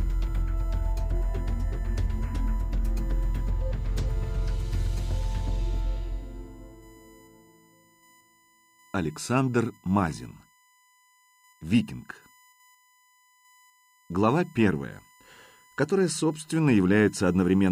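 From start to finish a steady 1 kHz whine, USB whine, sits roughly 35 dB below the signal. Current drawn in 1 ms bus frames leaks through power or ground. On a spectrogram it appears as an unbroken horizontal line at 1 kHz.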